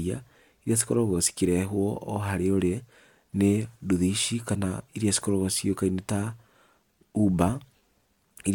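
No technical faults can be heard anywhere in the recording.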